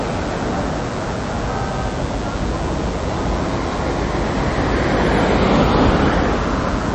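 From the first moment to the end, a thin, steady buzz sits under the sound. This is DECT cordless phone buzz. A nearby handset or base station sends radio bursts 100 times a second. The audio circuit rectifies them into a 100 Hz tone with many harmonics, roughly 20 dB below the signal.

Across the whole clip the audio also sounds watery and swirly, and nothing is heard above 12.1 kHz. The likely cause is MP3 compression at a low bitrate, around 40 kbps. With too few bits, the encoder cut the treble and dropped weak detail that flickers between frames.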